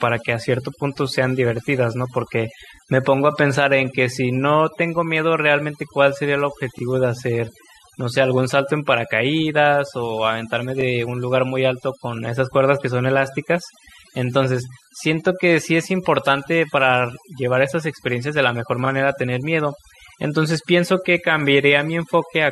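Overdone noise removal runs throughout the speech. Bands near the noise floor are cut away, leaving near silence with twinkling specks.

Overlapping chunks appear at 2.76–2.79, 6.79–6.81, 10.81–10.83 and 14.83–14.86 s. Each 4-second chunk starts early, so 23 ms replays at each join as a stutter.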